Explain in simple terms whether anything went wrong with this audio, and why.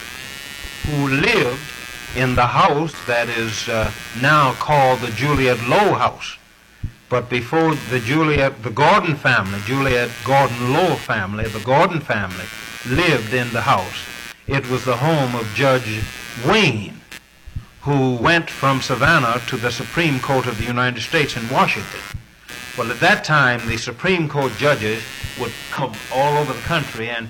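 A couple of things went wrong here, one constant and one occasional.

The constant one is computer activity noise. Under the whole clip there's a buzzy, scratchy layer pulsing about a hundred times a second, and it's fairly prominent. It comes and goes with what the computer is doing, not with the audio itself. That happens when the processor, graphics card or mouse changes how much power it draws and that jolt leaks into the audio circuit through the shared ground wiring.

The occasional one is compressed frames skipped. At 2.62, 6.04, 18.20 and 25.75 seconds the audio hops forward. The first three times it loses roughly 40 ms, which fits one compressed block of about 43 ms going missing. At 25.75 it loses around three blocks, so about 150 ms is gone.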